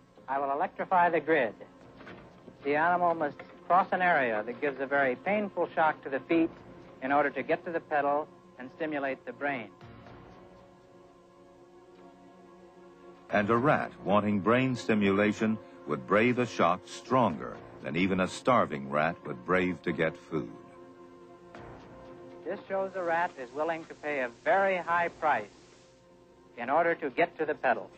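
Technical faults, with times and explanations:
22.71–26.12 s, digital radio blending to analogue: the receiver lost the digital stream and cross-faded over about 318 ms to the station's FM broadcast, returning to digital at 26.12 s. Broadband hiss sits roughly 30 dB below the programme, and level drops by about 1 dB, so the changeover is audible as a noisier, slightly quieter passage.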